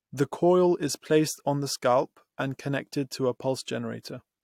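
A short piece of speech, and nothing technically wrong turns up anywhere in it, so there's nothing to flag here.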